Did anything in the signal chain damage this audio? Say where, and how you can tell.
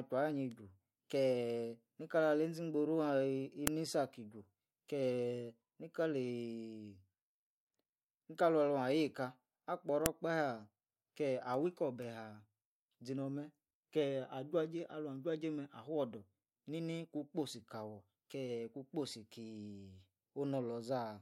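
Yes. A file header played as audio appears in the storage stage, where separate WAV pieces of this speech were joined without their headers being stripped. Sharp, loud snaps occur at 3.67 s and 10.06 s, each a single instant, where the header bytes were read as sample values. Unlike a buffer dropout, nothing goes missing around them, and unlike clipping they don't depend on how loud the speech is. They mark the piece boundaries.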